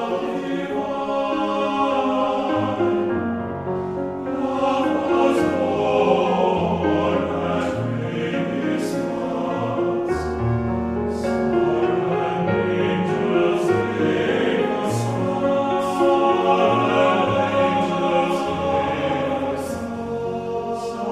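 No technical faults can be heard anywhere in the audio, and the signal holds steady and continuous throughout.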